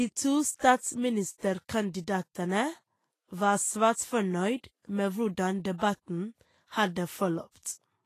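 From start to finish the speech carries plainly audible codec damage. The top end stops dead at about 14.2 kHz, with nothing above it. The upper frequencies sound hissy and grainy, as if fine detail had turned into noise. Consonant attacks are blurred and tones feel roughened. The likely cause is Vorbis compression at a low quality setting, consistent with a rate near 32 kbps. It coarsely quantises the treble and lowers the cut-off.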